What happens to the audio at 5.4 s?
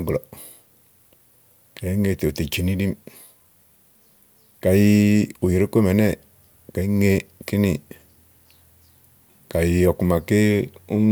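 Nothing goes wrong at 5.4 s: the speech carries on intact through that moment, with no dropout, click or distortion to be heard.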